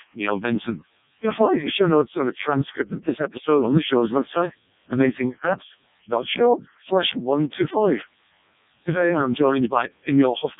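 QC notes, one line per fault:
Throughout: Codec 2 vocoder. The speech is rebuilt from sine waves driven by pitch, voicing, energy and a coarse spectral envelope, so the original waveform never survives. The result is robotic and buzzy, with heavy damage that fits the lowest 0.7 kbit/s mode, and nothing above 3.8 kHz. Unlike a plain low-pass filter or a muffled MP3, which keep natural timbre, this replaces the voice with a synthetic, metallic tone.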